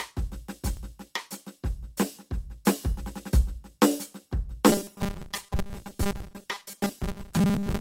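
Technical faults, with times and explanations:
0.77 s and 4.98 to 5.00 s, repeated buffer: a 10 ms chunk of the music plays again, once then twice, with hard joins, so you hear tiny clicky stutters.
4.69 to 7.81 s, robotic sound from repeated short buffers: the music turns into a rigid metallic buzz at 200 Hz, likely from a 5 ms chunk being looped over about half the audio while the real signal drops out.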